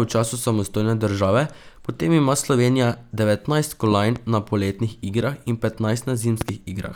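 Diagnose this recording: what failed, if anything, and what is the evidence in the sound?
Loud pops at 3.92–4.19 s and 6.41–6.51 s, each a double thump about 10 and 15 dB above the speech. They show as vertical broadband stripes and tall waveform spikes, likely voltage steps in the analogue wiring.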